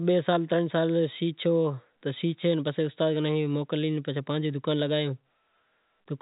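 No faults are audible; the speech carries the narrowband character of G.711 telephone coding, with nothing above about 3.8 kHz and only a faint level-following quantisation hiss beneath it.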